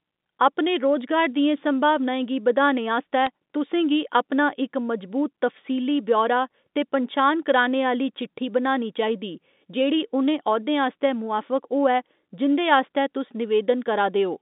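At 3.26 s, between "गी बधाने आस्तै" and "तुसें गी अपना इक", bit errors on the digital phone line flip a few G.711 samples, leaving brief sharp ticks. Unlike a dropout, the telephone-band speech continues uninterrupted, with a low error rate of roughly a fifth of a percent.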